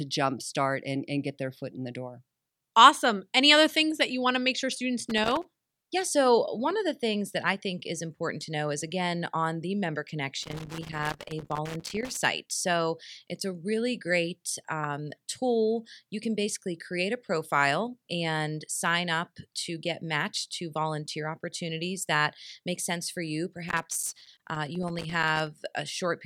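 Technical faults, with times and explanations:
5.10–5.88 s, 10.43–12.23 s and 23.68–25.48 s: loose connector crackle. Irregular bursts of crackle and scratching follow "to make sure students", "again on the member" and "make sense for you". A worn contact repeatedly makes and breaks, chopping the speech signal.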